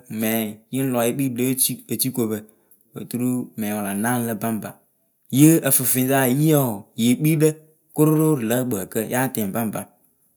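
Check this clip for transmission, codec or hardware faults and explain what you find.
No transmission, codec or hardware faults.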